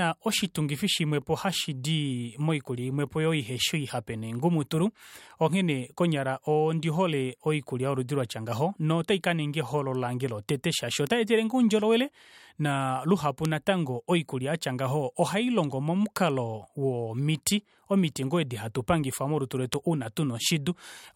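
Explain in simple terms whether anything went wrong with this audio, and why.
Something did go wrong: there are four short ticks in this speech, at 11.07, 13.45, 16.16 and 19.74 seconds. Each one is a bit error spike. A single digital bit got flipped, either in memory or on a link, so the value of one sample, or a few in a row, jumped way off and then snapped straight back. The ticks have nothing to do with the speech. The last two are noticeably louder than the first two.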